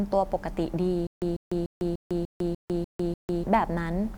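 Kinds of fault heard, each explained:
Stutter with silent gaps: from about 1.07 to 3.43 s the speech stops advancing and a 144 ms fragment repeats eight times, each followed by about 152 ms of dead digital silence, giving an even 296 ms cycle. This likely points to a stalled stream retrying its last buffer. Unlike a plain dropout, the same fragment keeps returning, and the speech that should have filled that span is lost.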